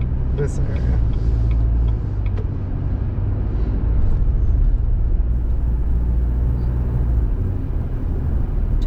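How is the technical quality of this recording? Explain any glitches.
From 5.32 s to the end at 8.87 s, a faint hiss and grainy roughness rides on the sound, growing on loud and bright passages and disappearing whenever the audio falls silent. This is sample clock jitter: the converter's clock wavers, so each sample lands slightly early or late. With timing wobble of around 7 microseconds, the error scales with how steeply the waveform is changing, leaving a noise floor roughly 50 dB below the signal.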